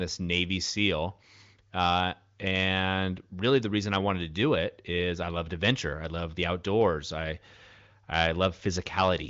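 Listening through the speech, nothing stood out, with the AMR wideband (HD Voice) path at 23.05 kbit/s carrying it and the usual absence of content above about 7.6 kHz.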